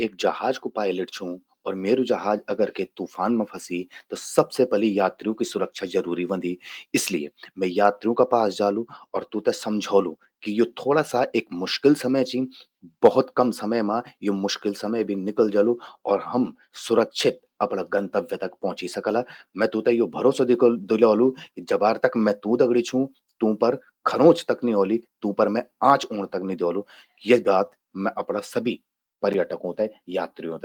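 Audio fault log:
No faults were found in this speech recording.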